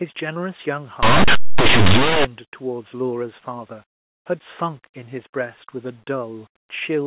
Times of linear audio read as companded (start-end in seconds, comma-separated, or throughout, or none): 1.03-2.25